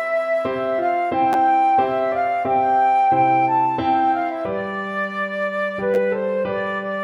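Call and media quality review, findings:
Chunks out of order at 1.33–1.35 s and 5.94–5.96 s. Two brief jumbled blips. Probable component: jitter buffer or playout writer. One 10 ms chunk lands one chunk late and plays after the chunk meant to follow it. Nothing dropped, sequence swapped. Three abrupt seams per event. Pattern fits a 10 ms framing with a reordering fault.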